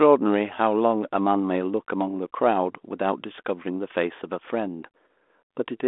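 Nothing stood out on listening to the speech, which comes across with the narrow, band-limited quality of a 32 kbit/s G.726 telephone line.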